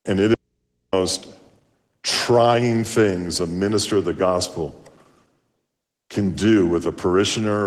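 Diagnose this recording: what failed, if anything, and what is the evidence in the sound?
Opus voice compression at the codec stage: speech is muffled and hoarse throughout, which fits hybrid SILK-plus-CELT coding at around 16 kbps.

Audio dropout to a faint residue from 0.34 to 0.93 s: signal cuts abruptly for 588 ms, leaving only mains hum roughly 50 dB down, likely a lost feed ahead of a live analogue input.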